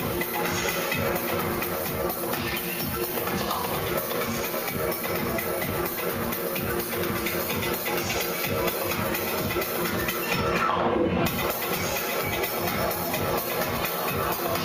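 No technical faults can be heard in this audio at any point.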